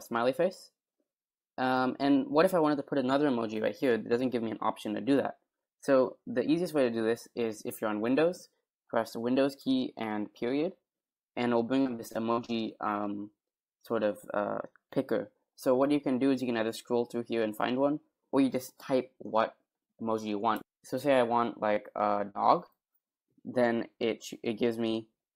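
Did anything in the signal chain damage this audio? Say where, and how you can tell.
Yes, and it's on the network side. From 11.81 to 12.50 s there's repeated packet loss, the robotic sound. A run of holes, the longest about 52 ms, adds up to roughly 0.2 s missing, with over a quarter of that stretch patched. Each time the receiver stretches the last bit of sound to cover the hole, and then the next one lands almost immediately. That's why it goes choppy instead of just dropping out once.

A bit later there are three isolated cases of short concealed packet loss: 21.74 to 21.78 s, 22.30 to 22.36 s and 22.66 to 22.70 s. The concealment fills about 20 ms, 40 ms and 20 ms respectively. The decoder extends the preceding sound through each gap and blends back into the real signal, so you hear a quick smear or wobble. The middle one is longer.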